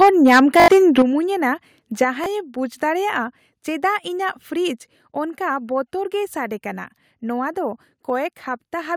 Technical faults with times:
0.01-1.02 microphone overload
0.02 microphone volume stepped down
0.60-0.68 repeated buffer
1.02 microphone volume stepped down
2.04 microphone volume stepped down
2.24 repeated buffer
5.10 microphone volume stepped down

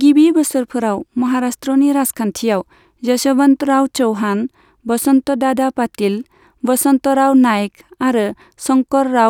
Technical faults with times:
none

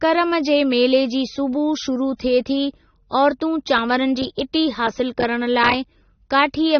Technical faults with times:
0.00-6.80 AAC compression

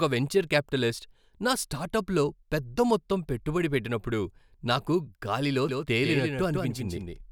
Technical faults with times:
5.69-7.31 doubled audio track

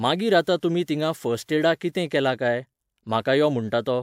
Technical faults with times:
none

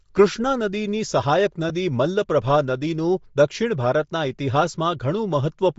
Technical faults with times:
0.00-5.79 Bluetooth LC3 compression
1.69 lost LE Audio frames

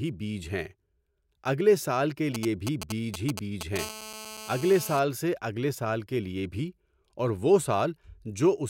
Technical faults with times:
2.35-3.78 GSM signalling bursts
3.79-4.99 GSM phone buzz

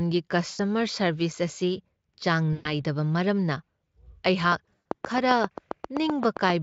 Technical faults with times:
0.49-0.61 VoIP packet loss concealed by the speech codec
2.53-2.70 VoIP packet loss concealed by the speech codec
4.52-6.51 train of clicks
4.66-5.02 VoIP packet loss concealed by the speech codec

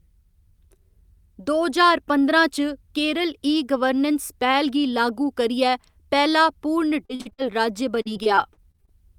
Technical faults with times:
7.05-7.40 repeated packet loss (robotic sound)
7.92-8.91 repeated packet loss (robotic sound)

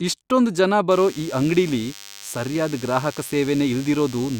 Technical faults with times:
0.90-4.39 DECT cordless phone buzz

